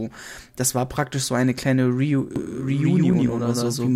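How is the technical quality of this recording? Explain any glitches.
The recording has one clear fault, which appears in its final stretch.

From 2.36 s to the end, a doubled audio track is present. A second full-band copy of the speech runs about 150 ms behind the original at roughly the same level. It cuts in abruptly and has no decay or room colour, so it sounds like a hard slapback echo rather than reverberation. The likely cause is the signal being captured twice, once through a slower path, or an edit leaving two misaligned copies in the mix.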